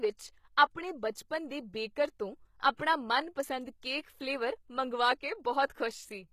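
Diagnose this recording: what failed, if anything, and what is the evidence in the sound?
The codec stage failed. Across the whole speech clip, the treble sounds bright but false. Sibilants come out gritty and lisped, with a metallic edge. The damage is plainly audible. The likely cause is HE-AAC compression at a low rate, and the sound fits a bitrate around 20 kbps. The encoder kept only the lower spectrum. It rebuilt the top octaves by spectral band replication, copying lower bands upward under a coarse envelope, so harmonics no longer line up.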